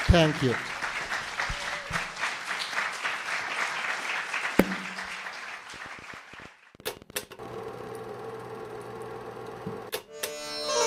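From 5.74 to 7.93 s a train of clicks ticks over the sound: some thirty uneven pulses at 12.4 per second, peaking level with the audio, likely from interference.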